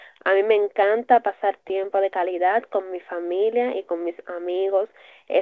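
Speech over a call line with the top end capped around 8 kHz, consistent with a G.722 path, and it hits a patch of repeated stalls (stutter) from about 1.64 to 1.99 s. You get four quick hitches, each one just the last sound held briefly, none longer than about 12 ms, adding up to roughly a tenth of that stretch. Nothing actually drops out. Packets were showing up late, so the jitter buffer kept running dry, which makes that bit drag.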